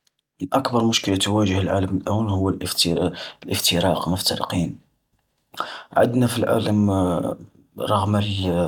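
No technical faults can be heard anywhere in the speech recording, so there is nothing to place in time or trace to a cause.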